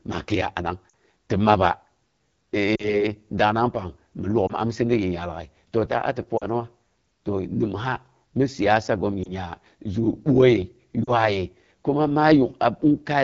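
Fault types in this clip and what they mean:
AMR wideband (HD Voice) codec: The speech sounds rough and raspy throughout. Its top band, from about 6.4 to 7 kHz, has a hissy, noise-like quality. The coder builds the lower band from pulse trains passed through a vocal-tract filter and fills the upper band with shaped noise instead of real detail. At this rate too few bits are spent on the pulses, which fits the 8.85 kbit/s mode, one of the two lowest.
lost AMR speech frames: Six short dips or warbles interrupt the speech, at 0.90 s, 2.75 to 3.05 s, 4.48 to 4.53 s, 6.37 to 6.46 s, 9.23 to 9.32 s and 11.03 to 11.10 s, each a brief gap with the voice coming back weak or rough. The missing audio amounts to about 20 or 40 ms in each, pointing to one or two missing 20 ms frames. Radio errors corrupted those frames, so the decoder reused the last good pitch and filter settings at falling gain.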